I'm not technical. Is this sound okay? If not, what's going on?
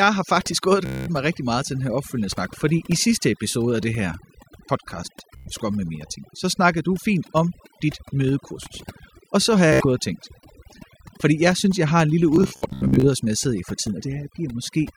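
No. A noise reduction tool was set far too strong, the problem called overdone noise removal. It switches off parts of the sound it mistakes for background hiss, so the gaps go almost silent with faint twinkling.

There is also Bluetooth stutter, where bits of the wireless signal arrived late or not at all. The receiver repeats a tiny slice until new sound arrives, heard as a brief buzzing stutter. It happens at 0.86 to 1.08 s, between "har faktisk gået og" and "mig rigtig meget til"; at 5.37 to 5.51 s; at 9.73 to 9.86 s, between "så har" and "og tænkt"; and in several bursts from 12.36 to 13.08 s, between "jeg har en lille" and "som jeg sidder i".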